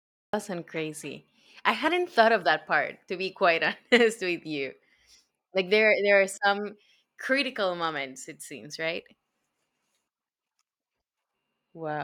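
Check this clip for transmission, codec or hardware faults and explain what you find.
One fault is present, at the very start of this speech clip.

Cut-off start, 0 to 0.33 s: capture or transmission began late, so the clip opens on digital silence and then jumps abruptly into speech already under way at 0.33 s, leading into "sound crazy I hadn't", with no natural attack or fade-in.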